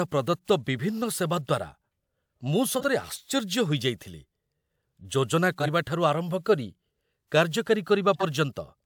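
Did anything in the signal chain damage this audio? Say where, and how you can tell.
Yes, at the codec stage. Compressed frames were skipped twice, first at about 2.77 to 2.84 s and again at 5.60 to 5.69 s, with the decoder dropping frames it either never received or rejected as damaged. Each time the speech jumps forward by something like 50 ms. The jump is a whole number of frames.

Near the end, at 8.14 to 8.23 s, a corrupt frame was decoded. Flipped bits in roughly two frames were not caught, so the decoder played them using wrong gains and misread codes. That placed energy at incorrect frequencies for about the length of those frames, and it comes through as a brief glitch laid over the speech, peaking somewhere around -15 dBFS.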